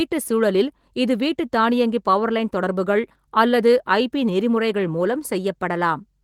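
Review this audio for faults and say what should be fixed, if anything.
Listening through this speech recording, nothing stood out that needs fixing, and the Opus voice compression in hybrid mode leaves only light coding texture across a full band reaching about 20.2 kHz.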